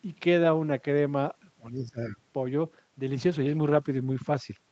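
From 1.6 to 2.17 s, the speech dips by up to about 15 dB in broken pieces, around 400 ms in all. This is speech suppressed in double talk, likely from an echo canceller that mistook the near talker for loudspeaker echo. On a waveform the envelope shows notches, and a spectrogram shows thinned, gappy bands.

From 3.04 to 4.65 s, the sound turns rough and watery, with the poorest stretch lasting about 1.06 s. This is a call bitrate drop, which fits the Opus encoder falling from about 48 kbps to around 13 kbps. On a spectrogram, detail smears into blocky patches and the upper band, already limited to 8 kHz on this call path, thins further.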